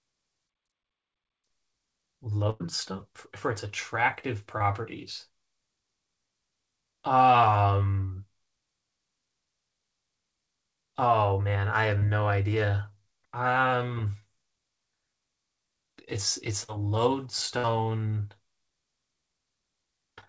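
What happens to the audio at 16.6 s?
At 16.64 s the speech briefly smears for about 60 ms, until 16.70 s, as a short concealed packet loss. A few tens of milliseconds of the call arrived too late for the decoder, so the receiver invented roughly 42 ms of replacement by extending the preceding sound, following its pitch if voiced or using shaped noise if not, before crossfading back into the real signal. The G.722 call path, with nothing above 8 kHz, carries the concealment.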